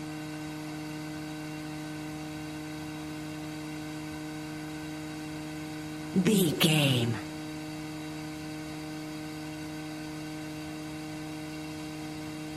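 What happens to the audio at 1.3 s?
Nothing goes wrong at 1.3 s; the audio plays through that moment intact, with no dropout, click or distortion.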